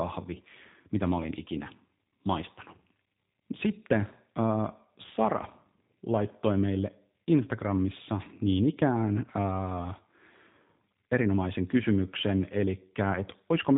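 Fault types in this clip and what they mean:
G.729 codec: Throughout the speech, nothing above 3.8 kHz survives, and what remains sounds rebuilt rather than merely filtered. The voice stays intelligible but comes out rough, slightly buzzy and synthetic, because a predictive model resynthesises it from a few pulses per frame. That plainly audible roughness fits an 8 kbit/s G.729A encoding. A simple telephone-band low-pass would dull the top in the same way but leave the voice sounding natural.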